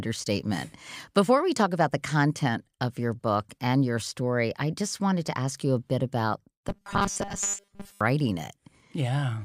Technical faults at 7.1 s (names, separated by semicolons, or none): robotic sound from repeated short buffers